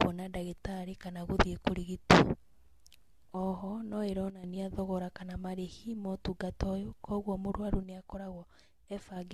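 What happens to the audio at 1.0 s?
At 1.0 s, as through the whole clip, the speech sounds swirly, hollow and smeared, with softened consonant attacks. This is generation loss, likely from AAC encoding at around 64 kbit/s repeated a few times. Each pass requantises on a shifted frame grid, compounding noise and spectral gaps beyond what one encode would leave.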